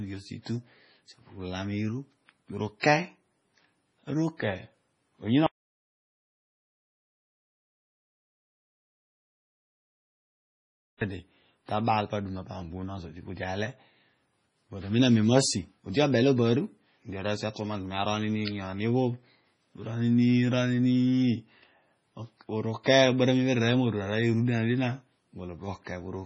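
Throughout the speech the sound is watery and swirling, with a metallic chirp on sibilants and softened attacks. Nothing is present above 10.5 kHz. This is heavy MP3 compression, likely at a very low bitrate; the damage fits something around 24 kbps. Starved of bits, the encoder discards weaker frequency lines, which flicker in and out from frame to frame, and it cuts off the top of the spectrum at a fixed frequency.

From 2.80 to 2.83 s a short hiss arrives just ahead of a sharp attack, and the attack itself sounds blurred. This is pre-echo, spread over 34 ms. The codec distributes its quantisation noise across an entire transform block, so the noise sized for the loud onset late in the block also fills the quiet moment before it.

At 5.46 s the sound cuts out completely and returns at 11.01 s. This is an audio dropout to silence lasting about 5.55 s. The gap has no room tone at all, and whatever was said during it is lost. 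The likely cause is an interrupted input, such as a disconnected device, a failed link or a mute, while recording carried on writing silence.

Pre-echo occurs again from 22.83 to 22.86 s, spread over 22 ms. The same smeared hiss comes just before an attack.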